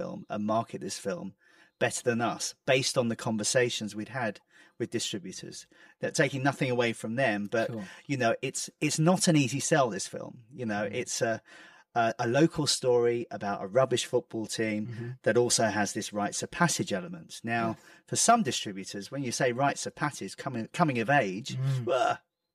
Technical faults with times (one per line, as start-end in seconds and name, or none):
0.00-22.55 channel delay (comb filtering)